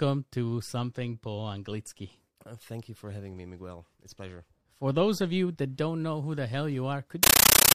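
Speech, cut short by a compressed stream played as audio. At 7.23 s, right after "know who the hell", the speech gives way to loud, chattering static that runs to the end. The static comes in bursts about 31 times a second, each about 13 ms of noise followed by silence. That pattern fits an undecoded AC-3 (Dolby Digital) stream, likely at 640 kbps, whose data frames are being played directly as samples instead of being decoded.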